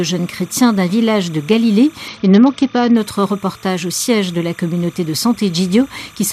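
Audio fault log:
throughout: timecode bleed. A steady chirping warble sits behind the sound for the whole clip, roughly 30 dB below it. Its pitch flips between two tones near 1 and 2 kHz, the signature of linear timecode running at 29.97 frames per second. The code's square wave is leaking from an adjacent track or cable into this path. Because the code never stops, the warble never drops out.
2.08–2.97 s: Bluetooth SBC bit pool drop. For just under a second the treble goes dull and a gritty, grainy noise rises, then clears as quality returns. This fits the encoder cutting its bit pool from around 28 to about 8, near 72 kbps, to keep a congested link alive. With so few bits the highest sub-bands get almost nothing, which explains the dullness, and the remaining bands are coarsely quantised, which produces the grit.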